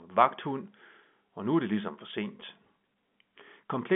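At 2.41 s the speech briefly catches on itself, a sign of packet loss with pitch repetition. About 10 ms of audio went missing, which fits a single lost packet, and the receiver filled the hole by replaying the last pitch period. Because the gap is so short, the result is a tiny held, slightly buzzy smear rather than a drop to silence. A plain dropout would leave a click or hole, whereas here the pitch carries straight through. The surrounding telephone-band G.711 sound, limited to roughly 150 Hz to 3.5 kHz, continues unchanged across the patch.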